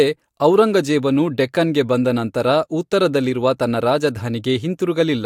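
Nothing in this bit of speech stands out as a technical problem; there's no glitch or disturbance anywhere to point to.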